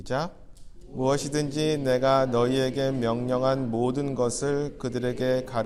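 No technical faults can be heard anywhere in the clip, and the signal holds steady throughout.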